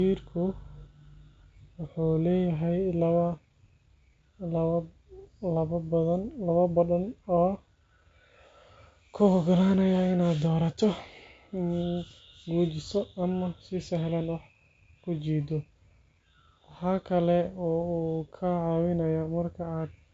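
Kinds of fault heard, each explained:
Nothing stood out on listening to the speech; no fault could be heard at any point.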